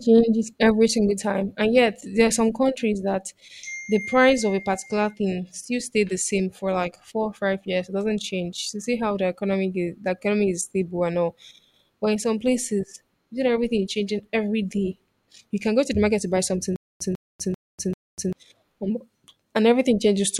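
From 16.76 to 18.33 s the speech breaks into a stutter with silent gaps. A 147 ms fragment plays four times, each followed by about 245 ms of dead silence, repeating every 392 ms. The likely cause is a stalled stream replaying its last buffer. The speech from that stretch is lost.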